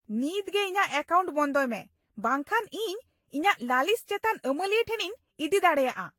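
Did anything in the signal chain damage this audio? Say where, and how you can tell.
Yes. The damage is at the codec stage, across the whole speech clip. It sounds swirly, smeared and hollow, with blurred attacks, and nothing above 19.1 kHz. This is likely generation loss: roughly ten lossy re-encodes, each requantising on a shifted frame grid.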